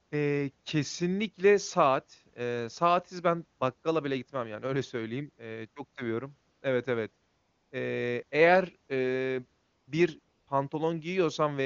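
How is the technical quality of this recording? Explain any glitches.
The recording has one recurring fault: AMR comfort noise in four short pauses. The wideband phone-codec band limit can be heard, with speech sounding clean, which fits the highest AMR-WB mode.

AMR comfort noise occurs from 6.51 to 6.61 s right after "çok seviyorum", from 7.27 to 7.71 s, from 9.63 to 9.87 s after "eğer eee", and from 10.23 to 10.47 s. In each gap, lasting 100 to 440 ms, the handset judged the talker silent and stopped sending speech frames. The receiver then generated synthetic noise from a coarse level-and-spectrum description. The real background drops out and is replaced by a smooth, steady hiss that switches in and out at the pause edges.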